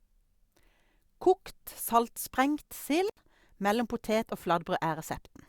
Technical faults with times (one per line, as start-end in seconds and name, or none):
3.08-3.18 intermittent contact